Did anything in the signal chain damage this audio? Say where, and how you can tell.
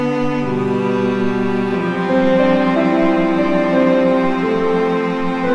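No, nothing in the signal chain damaged this music.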